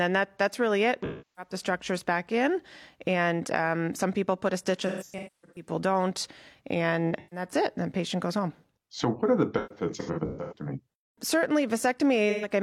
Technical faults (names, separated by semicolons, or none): sample clock jitter; AAC frame loss with concealment